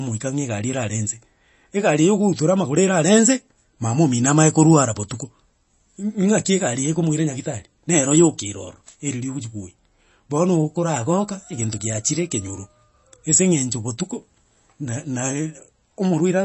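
From start to finish the speech carries plainly audible damage of the kind left by MP3 compression, likely at a low bitrate. Nothing survives above 8 kHz, so sibilants lose their edge. Unlike a simple low-pass filter, the band below the cut-off sounds watery and swirly, and s sounds pick up metallic chirps. This happens because weak frequency lines drop in and out from frame to frame as the encoder runs short of bits.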